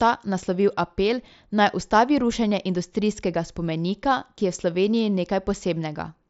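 No technical faults can be heard in the speech; it carries the band limit of a wideband Bluetooth headset link, consistent with the mSBC codec, with nothing above about 7.7 kHz and only a light grainy texture from the coding.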